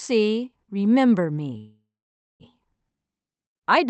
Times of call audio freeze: 1.57-2.43

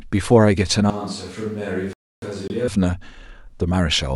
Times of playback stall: 1.93-2.22

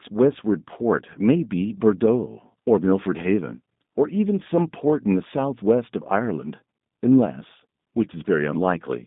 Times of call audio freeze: none

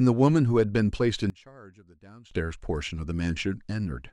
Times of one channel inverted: 1.30-2.31

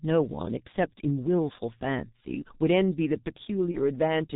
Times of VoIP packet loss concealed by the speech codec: 3.71-3.78

